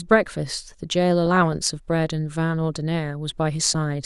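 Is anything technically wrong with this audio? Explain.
Yes. DAB burbling at 1.26 to 1.53 s and 3.60 to 3.75 s: residual bit errors corrupt MP2 sub-band samples, giving short blips of noise in single sub-bands over the speech.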